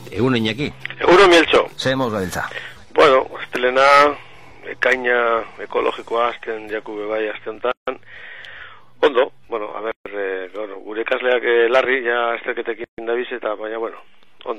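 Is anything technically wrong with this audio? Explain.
Yes. There are gaps at joins of encoded pieces at 7.72 to 7.87 s (about 158 ms), 9.92 to 10.06 s (about 142 ms) and 12.84 to 12.98 s (140 ms). The pieces were encoded separately and joined without trimming. Each one kept its encoder start delay and last-frame padding, so a short, smeared hole of silence opens and the sound then resumes where it left off.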